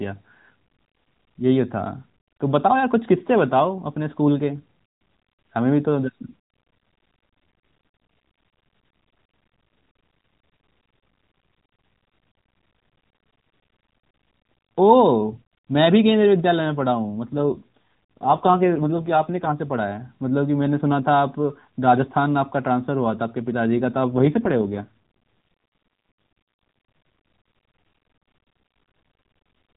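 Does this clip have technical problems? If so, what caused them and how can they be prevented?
Yes. From 17.3 to 19.5 s and again from 24.1 to 24.9 s the speech turns buzzier and more synthetic, with no gap and no change in band. This is an AMR rate drop: the link weakened, and the mobile codec went from what sounds like 12.2 kbps down to about 4.75 kbps, spending bits on error protection. Better radio coverage or signal strength at the handset would keep the codec at its full rate.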